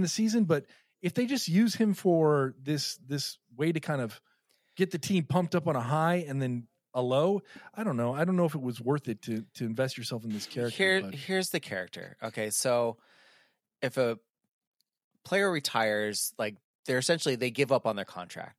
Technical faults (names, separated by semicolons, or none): none